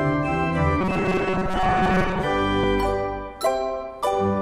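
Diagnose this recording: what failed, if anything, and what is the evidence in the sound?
Driver or buffer stage. From 0.81 to 2.25 s the sound turns into a rigid metallic buzz at 188 Hz. This is robotic sound from repeated short buffers, likely an underrun, where a segment of about 5.3 ms is looped. Most of that span is repeats, and the real audio is skipped.

Driver or buffer stage again. There is a dropped buffer (overrun) at 1.20 s, where the sound jumps ahead by roughly 10 ms. A second one at 2.64 s skips about 40 ms. Samples were likely overwritten before being read, so the two sides join with no gap.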